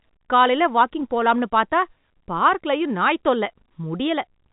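No technical fault can be heard in this speech recording, which carries the band limit of G.711 telephone coding, with nothing above 3.8 kHz.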